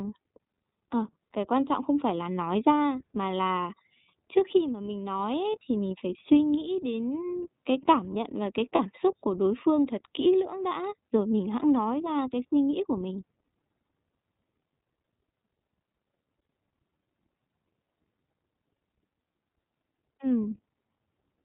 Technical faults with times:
0.00-21.45 iLBC codec
8.75-8.80 lost iLBC frames

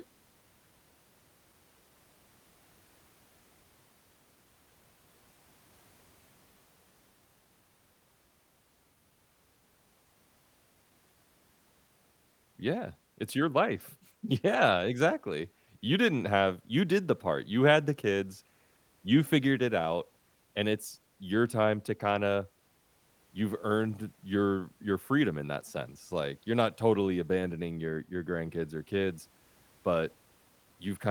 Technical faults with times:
none

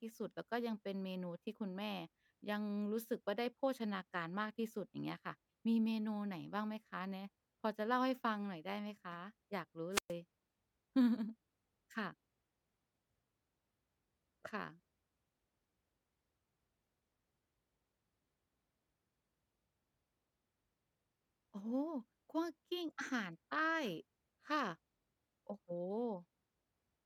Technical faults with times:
9.91-10.13 wireless microphone squelch dropout

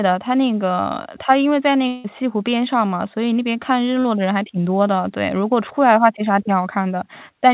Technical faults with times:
1.88-2.07 long network dropout
4.00-4.07 short concealed packet loss

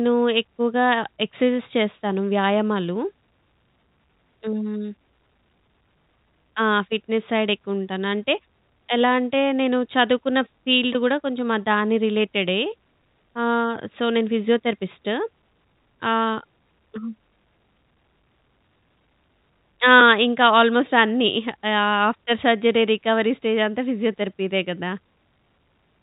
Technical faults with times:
none

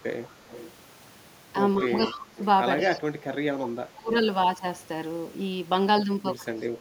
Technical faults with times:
0.00-0.28 speech suppressed in double talk
0.24-0.71 echo leak
1.84-2.41 speech suppressed in double talk
1.95-2.45 echo leak
2.80-2.90 echo leak
2.88-4.12 speech suppressed in double talk
6.53-6.64 speech suppressed in double talk

